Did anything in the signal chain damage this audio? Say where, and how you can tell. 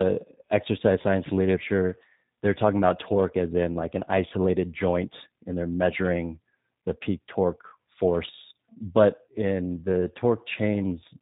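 Yes. Throughout the whole clip the speech sounds rough, dull and warbly, with nothing above about 3.8 kHz, and the grit is heavier than a single narrowband coder would leave. The damage happened at the codec stage: tandem speech coding, where the call was decoded and re-encoded at link borders. The sound suggests two speech codecs in a row, an ADPCM stage such as 40 kbit/s G.726 followed by 8 kbit/s G.729A, the later one compounding the earlier one's errors.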